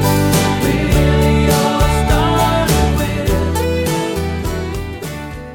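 Nothing in this recording stands out as a technical fault, with no glitches, dropouts or distortion turning up anywhere along the way.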